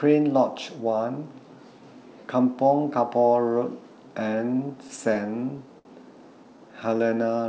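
From 4.36 to 5.88 s you get repeated stalls (stutter): the jitter buffer kept running dry, so the receiver stretched the last sound across twelve little holes, about 172 ms in all, the longest 64 ms. Nothing's lost, but that stretch drags and hiccups.

Then from 6.44 to 7.37 s there's a jitter buffer slow-down: the buffer was topping itself up by repeating single pitch periods, adding about 98 ms. The audio plays at roughly 90% speed with the pitch unchanged, so it sounds drawn out, all below the 8 kHz ceiling you'd expect from G.722.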